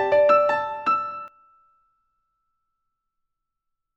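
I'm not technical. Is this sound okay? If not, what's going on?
No. From the start until 1.28 s there's a doubled audio track: an equally loud copy trails about half a second behind. Unlike an echo, it never fades and stops abruptly, likely from a second, slower capture path.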